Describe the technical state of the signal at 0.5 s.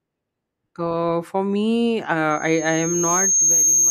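At 0.5 s the speech signal is intact, with no audible technical fault at that moment.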